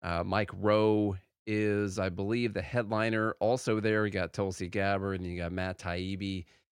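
No technical faults can be heard anywhere in the speech recording.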